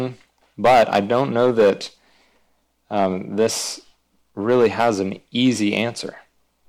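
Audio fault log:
0.65–1.70 s, hard clipping: the speech is overdriven by about 12 dB, the most of the four. Peaks are cut flat, adding high harmonics heard as fuzz.
2.97–3.47 s, hard clipping: about 4 dB of overdrive. Flattened peaks crackle.
4.49–4.90 s, hard clipping: about 10 dB of overdrive. Squared-off tops spread distortion far up the spectrum.
5.41–5.82 s, hard clipping: about 2 dB of overdrive, the least. Only the peaks are cut flat, giving crackle on them.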